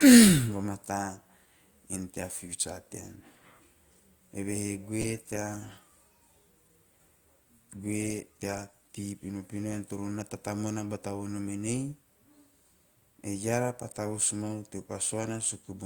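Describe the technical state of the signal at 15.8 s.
At 15.8 s the speech signal is intact, with no audible dropout, clipping, distortion or other fault at that point.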